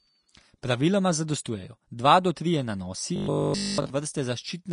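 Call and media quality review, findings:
Plainly audible codec damage throughout: grainy, hissy treble, nothing above 10.6 kHz. Likely Vorbis compression at a low bitrate, roughly 36 kbps, coarsely quantising the high band into noise.

Pre-echo at 0.62 s and 1.44 s, the latter just before "dva do trije nanosi": hiss leading each attack by 12 ms and 10 ms. Codec block noise spreading ahead of a late transient.

Metallic 50 Hz buzz from 3.16 s to 3.90 s, following "dva do trije nanosi", covering the whole stretch. Robotic sound, likely from repeated short buffers, each about 20 ms long, while the real audio is skipped.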